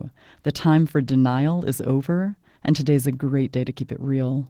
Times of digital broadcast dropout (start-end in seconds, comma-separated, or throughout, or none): none